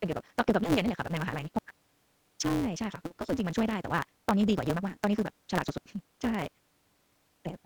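From start to end, the speech has a block size mismatch (truncated): each block loses its tail, so the audio races along at 1.88 times normal speed with roughly normal pitch, under a 172 Hz buzz that fits 256-sample reads. Spectrograms show regular vertical seams; waveforms show abrupt joins.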